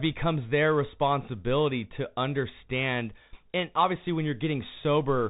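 From start to finish the speech passes through a Bluetooth CVSD headset codec, the narrowband link used by headsets. It codes each sample as a single up-or-down bit with an adapting step, which fits a 64 kbit/s stream. Nothing above 3.8 kHz survives, so the voice sounds boxed-in and dull. The codec damage is plainly audible: s sounds turn scratchy, loud bright moments distort where the step can't keep pace, and a granular hiss sits underneath. A spectrogram shows a flat ceiling near 3.8 kHz with a grainy noise floor below it.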